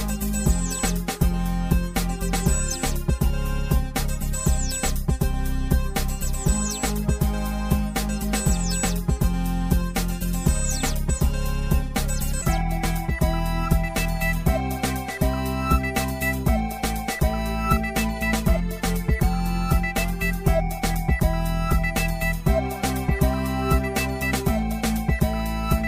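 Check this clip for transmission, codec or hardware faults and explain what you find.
One fault runs through the whole clip: channel delay (comb filtering). One channel arrives roughly 5 ms behind the other, and when the pair is summed to mono, content common to both cancels wherever the two copies fall out of phase. That puts the first notch near 100 Hz, with further notches repeating at evenly spaced intervals of about 200 Hz up the spectrum. The result is a hollow, phasey sound with a fixed, unmoving coloration.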